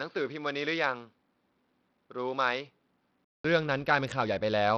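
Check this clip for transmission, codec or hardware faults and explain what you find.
Two faults are audible in the speech.

Input switched to a poorer device, 0.0 to 3.45 s: a likely change of input left the speech band-limited, with nothing above 4.8 kHz, quieter, and carrying faint extra noise. A short silence of 200 ms marks the switch.

Bluetooth SBC compression, throughout: heavy damage, likely from coarse sub-band quantisation at a bitrate that fits about 64 kbps, makes the treble flicker and adds gritty noise.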